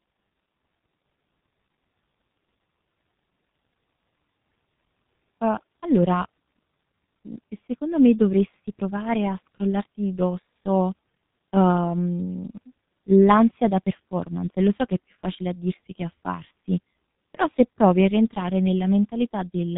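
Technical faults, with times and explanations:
Throughout, G.723.1 codec: the speech has been squeezed through a low-rate internet-telephony codec, and the damage is heavy. The bandwidth stops at about 3.8 kHz, so the speech sounds muffled. The hoarse, rough texture fits a rate of roughly 6.3 kbit/s. The coder works in 30 ms frames and updates its model of the voice only slowly, so consonants smear into one another and lose their crisp edges.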